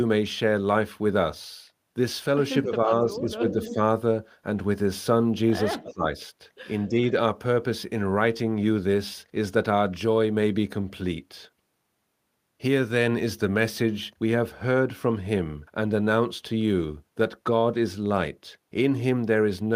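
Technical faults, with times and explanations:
2.64 to 3.79 s, 5.83 to 6.04 s and 6.88 to 7.06 s: speech suppressed in double talk. Speech dips by up to about 10, 20 and 5 dB, likely because the echo canceller mistook overlapping talk for echo.
3.51 to 3.75 s and 5.82 to 5.93 s: echo leak. A copy of the speech returns 287 ms late, about 10 and 15 dB down, likely from loudspeaker pickup the canceller missed.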